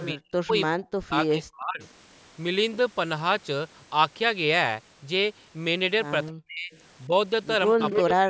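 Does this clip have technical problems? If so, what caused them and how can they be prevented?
Yes. An echo leak appears at 0.00–0.06 s, 6.73–6.80 s and 7.78–8.00 s: a copy of the speech returns about 292 ms late, at about -15 dB, about -35 dB and about -5 dB relative to the speech. The likely cause is a far-end loudspeaker whose echo canceller let some of its microphone pickup back into the call. The fixed 292 ms gap separates it from room reverberation, which smears continuously rather than repeating as a distinct copy. Using a headset, or retuning that device's echo canceller, would prevent it.

Speech suppressed in double talk occurs at 0.12–1.81 s (roughly 1.5 s affected), 6.28–6.72 s and 7.99–8.30 s, each sinking by about 30–40 dB, plus a brief dip of about 10 dB at 7.07–7.11 s. This is likely the echo canceller mistaking the local talker for loudspeaker echo while both sides spoke, and turning everything down. 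Unlike packet-loss dropouts, these are deep level dips clustered around overlapping speech, not sudden glitches. Better echo cancellation that handles simultaneous talk, or a headset on the far end, would prevent it.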